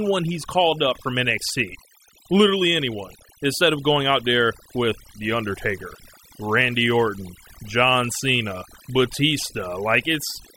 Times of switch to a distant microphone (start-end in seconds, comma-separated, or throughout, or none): none